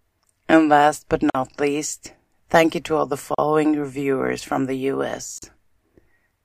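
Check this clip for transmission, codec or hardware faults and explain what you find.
The speech drops out three times, about every 2 s, from a gap at a join of encoded pieces: at 1.30–1.35 s between "last but" and "least thank you to" (47 ms), at 3.35–3.38 s between "you to all the" and "reviewers from the", and at 5.38–5.42 s (both 38 ms). Each is a brief hole with smeared edges, and the speech resumes where it stopped. Two-second chunks were encoded separately, and each join kept the encoder's start-up delay and last-frame padding as silence.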